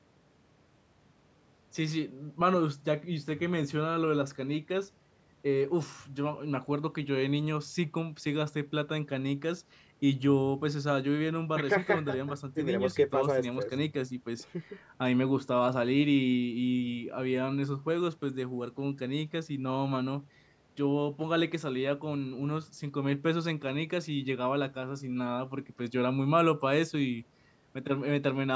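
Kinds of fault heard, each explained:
No kind of fault can be heard anywhere in the recording. The speech carries the sound of call microphone processing, with nothing above 8 kHz and the lowest bass trimmed away by its high-pass filter, which is how that path normally works.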